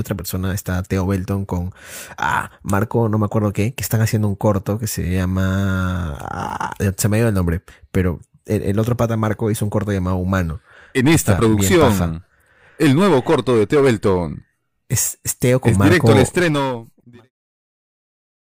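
No technical faults are present in this speech; the level eases away in a smooth fade out that finishes at 17.32 s.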